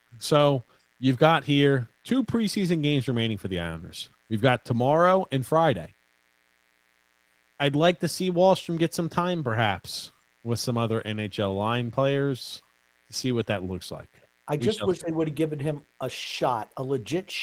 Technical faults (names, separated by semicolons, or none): mains buzz; Opus voice compression